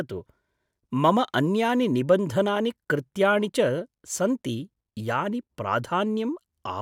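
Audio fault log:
No fault is heard in this speech clip.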